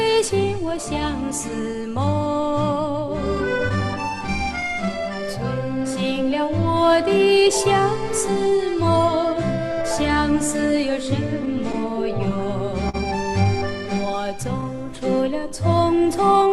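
Clock drift between sender and receiver runs through the whole clip. The sender's clock is slow, by roughly 4 percent. The receiver's jitter buffer keeps draining because audio arrives a little late each second. To cope, the receiver has to stretch the stream again and again. No single moment gives this away. Instead, the timing feels faintly loose from start to finish, with small hiccups at uneven spacing.

Repeated timing corrections are that stretching in action, from 0.04 to 16.48 s. The receiver keeps repeating short pieces to fill the shortfall. The audio plays at 97 percent of its proper speed. Across the clip, roughly half a second of material is added. Every edit goes the same way, lengthening the sound. They are unevenly spaced. Each is small and reads as a slight stutter or an unsteady tempo rather than a clear break.

Scattered short gaps appear between 3.69 and 4.59 s. About three packets go missing or arrive late within this stretch. 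Each hole is short, the longest around 10 ms. The receiver covers each one by carrying the last sound forward. Together the patches fill roughly 20 ms, a small share of the span. Nothing is lost outright. The effect is a few brief ticks or smears in otherwise clear audio.

A short stall from a late packet occurs at 12.89 to 12.96 s. One packet is not there when it is due. The jitter buffer runs dry. The receiver holds the last sound for 45 ms while it waits. Once the packet turns up, playback resumes from the same point. Nothing is skipped, but the delay grows by 45 ms. A sound lingers too long here, with a slight buzzy or dipping quality.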